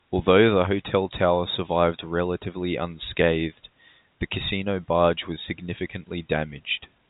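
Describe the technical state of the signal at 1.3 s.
At 1.3 s the signal is intact, carrying the band-limited sound of G.711 telephone coding, with nothing above about 3.8 kHz.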